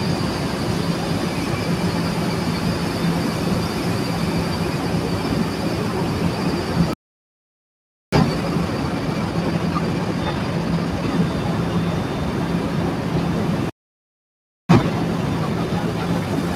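Playback stalls at 6.93 to 8.13 s and 13.70 to 14.69 s cut this recording of everyday sounds to silence for about 1.2 s and 1.0 s. Each time, the sound resumes where it stopped, likely because the player ran dry of buffered data or its audio thread was briefly blocked. Time-compressed catch-up follows each gap, from 8.13 to 11.13 s at 1.25 times speed and from 14.69 s to the end at 1.15 times. The player trims its backlog by splicing out short slices and cross-fading the joins, so the sound is rushed at unchanged pitch.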